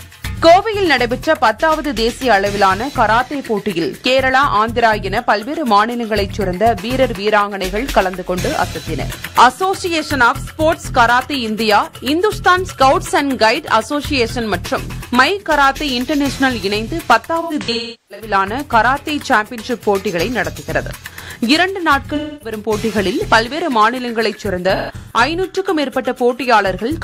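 The audio has AAC frame loss with concealment at 17.4–18.3 s, 22.15–22.56 s and 24.76–25.21 s. Missing frames are rebuilt from the last good spectrum. The first gap has a run of about 0.4 s. The later gaps sound like smeared, noisy or phasey patches.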